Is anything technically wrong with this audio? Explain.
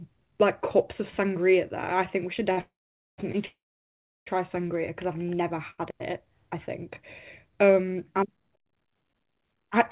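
Yes. The speech is interrupted by two kinds of fault, clustered between about 2.5 and 5.8 s.

The short stalls from a late packet occur at 2.52 to 2.59 s, 3.32 to 3.36 s and 5.70 to 5.80 s. Each time a packet missed its playout slot, the jitter buffer drained, and the receiver stretched the last sound for 48, 18 and 77 ms respectively before resuming where it left off. Nothing is lost. A syllable is simply held too long, with a faint buzzy smear or dip.

The call audio freezes run from 2.61 to 3.20 s and from 3.46 to 4.28 s. The likely cause is packets being held up in transit long enough to empty the jitter buffer completely. The receiver first extends the last sound as a fading buzz, then drops to silence, for about 470 ms in the first freeze and 700 ms in the second. Playback then picks up from the same point. This inserts gaps of 570 and 807 ms rather than cutting anything out.

The call codec's band limit is audible alongside these faults, with nothing above 4 kHz, which fits G.711 A-law.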